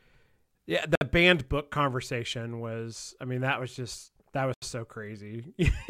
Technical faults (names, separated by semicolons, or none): Bluetooth stall